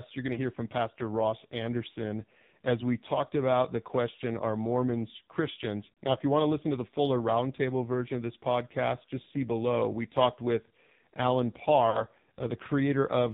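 Throughout, the speech carries the AMR narrowband mobile codec: a hard ceiling at 4 kHz on the spectrogram, with nothing above it. Harmonics look smeared and the voice sounds buzzy and synthetic, which points to a low mode of around 5.9 kbps.

Lost AMR speech frames occur from 0.34 to 0.51 s, right after "you're going". The decoder reuses its last pitch and vocal-tract settings at falling gain, producing a brief warbling dip that fits one lost 20 ms frame. The waveform envelope sags, and the spectrogram shows smeared, repeated harmonics.

From 11.90 to 12.06 s, a second concealment fits two lost frames, about 40 ms. The sound stretches and fades toward silence before recovering roughly, visible as a deeper, longer amplitude trough.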